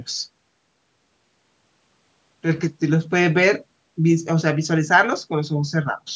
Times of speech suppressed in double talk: none

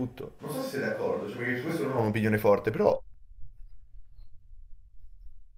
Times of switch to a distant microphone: 0.41-1.97

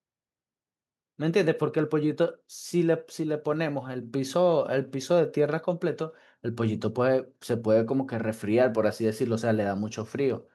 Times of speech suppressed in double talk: none

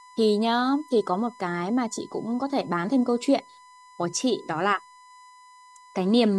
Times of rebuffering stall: none

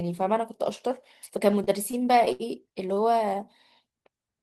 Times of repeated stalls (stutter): 1.51-2.99

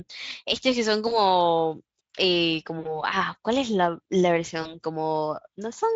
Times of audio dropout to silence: none

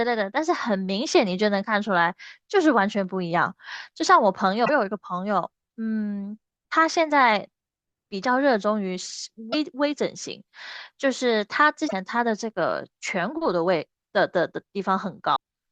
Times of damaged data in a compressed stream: 4.62-4.70, 9.49-9.54, 11.85-11.93, 15.32-15.36

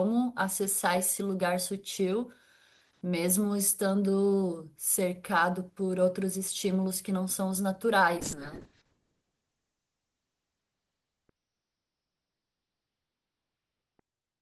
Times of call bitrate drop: 8.23-14.42

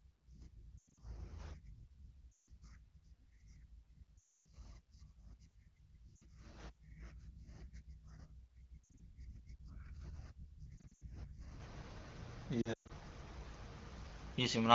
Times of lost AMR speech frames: 0.78-1.03, 2.32-2.48, 4.18-4.46, 6.16-6.22, 8.84-9.06, 10.78-11.04, 12.61-12.91

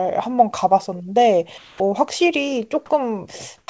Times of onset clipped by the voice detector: 3.66-3.68

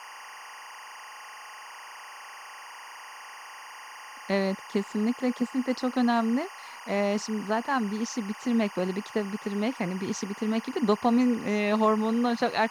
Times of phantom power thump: none

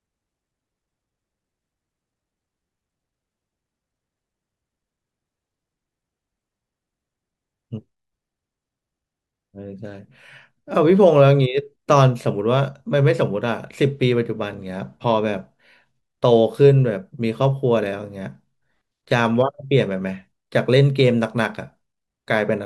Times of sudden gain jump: none

